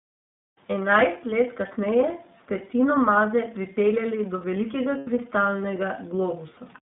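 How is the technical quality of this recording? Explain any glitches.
The recording has limited technical quality: the speech comes through a narrowband codec with plainly audible damage, and there is one short dropout.

iLBC codec: Throughout, the speech is coded with iLBC, in a mode that fits 13.33 kbps with 30 ms frames. Each frame's excitation is coded on its own, and the line passes only about 150 Hz to 3.7 kHz, so the voice sounds muffled, slightly rough and synthetic.

Lost iLBC frames: From 4.97 to 5.08 s, packets went missing, a gap that fits three 30 ms frames (about 90 ms). The decoder filled it by repeating the last pitch cycle mixed with noise, heard as a briefly held, buzzy vowel before the speech recovers almost at once.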